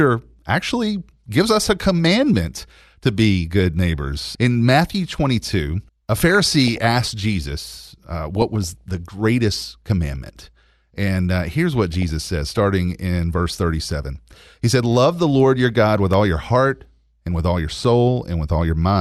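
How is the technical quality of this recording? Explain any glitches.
The speech is marred by DAB burbling in three places: 6.29 to 6.84 s (just before "jesus uh"), 8.36 to 8.81 s (between "jesus uh" and "the greatest commandment and"), and 11.93 to 12.62 s (between "and uh here's what" and "in verse"). Weak reception lets bit errors slip past error correction into the MP2 data. The corrupted samples put short blips of noise in individual sub-bands, and corrupted scale factors make sub-bands jump in level for up to a frame, which fits a bit error rate of roughly 0.1 to 0.2 percent. The result is a burbling laid over the speech. Unlike a dropout or packet-loss gap, the audio never goes silent. The programme keeps running underneath while narrow bands warble erratically.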